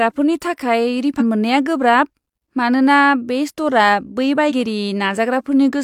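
It's a speech clip with two short bursts of damaged data in a compressed stream. The first runs from about 1.16 to 1.22 s, right before "मोननाया गोब्राब", and the second from 4.46 to 4.52 s, just after "स्ट'रआ बै". Each lasts around 50 to 60 ms and comes through as a brief glitch. Some of the encoded bytes were corrupted, so the decoder misread those frames and lost sync until it found a clean frame header again.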